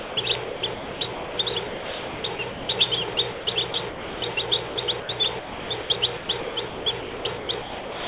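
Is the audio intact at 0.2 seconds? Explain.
Yes, the sound has returned by 0.2 s. From 0.00 to 0.17 s, steady low noise stands in for the audio, likely the voice detector dropping sound it mistook for background. Unlike a packet-loss gap or click, the noise stays even until the real sound resumes.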